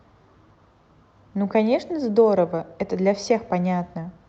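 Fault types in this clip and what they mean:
No fault types are present in this clip, which comes through an Opus call path whose audio band ends at about 8 kHz.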